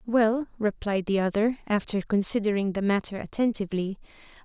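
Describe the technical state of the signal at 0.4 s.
At 0.4 s the speech signal is intact, with no technical fault present at that moment.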